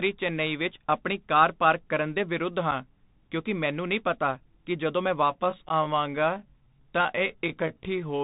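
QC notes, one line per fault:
Throughout: Bluetooth CVSD headset codec. The speech sits in a narrow band with nothing above 4 kHz, typical of a 64 kbps one-bit delta link. S sounds turn scratchy, loud bright passages distort as the adaptive step lags, and a granular hiss runs underneath.
2.71 s and 5.69–5.71 s: unconcealed Bluetooth headset packet loss. Gaps of about 7.5 ms and 11.2 ms, roughly two and three voice packets, are filled with silence or an idle pattern. The speech cuts out with hard edges, then returns briefly quieter as the CVSD step size rebuilds.
5.24–8.2 s: time-stretched section. From here to the end the pace drops to about 0.68 of normal while the pitch holds steady. The speech drags, likely from software repeating short pieces to lengthen the audio without shifting pitch.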